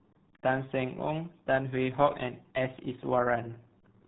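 Throughout, the speech carries heavy RealAudio 14.4 codec damage. Nothing passes above 3.9 kHz, so it sounds muffled and gargly, which fits an 8 kbit/s dial-up codec.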